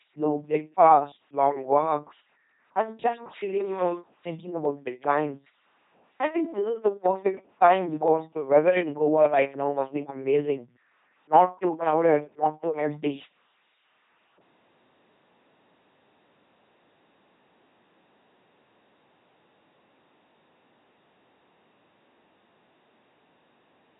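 Speech runs through an LPC-10 vocoder for the whole clip, with heavy codec damage. Each moment is rebuilt from a simple ten-pole vocal tract filter driven by either a pulse train or noise, so the speech has a buzzing, mechanical robotic quality. Any wrong voicing choice comes out as buzz or hiss in place of the natural mix. Nothing is present above 3.8 kHz, and the very coarse rendering fits a 2.4 kbit/s coder.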